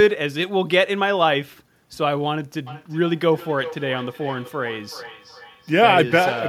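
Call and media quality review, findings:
Feedback echo between two devices, from 2.67 s to the end of the clip. Speech returns roughly every 400 ms at about 16 dB below the direct level. Likely cause: a second device in the room replaying what the first device's microphone sent. Spectrogram shows faint, regularly spaced copies trailing each syllable.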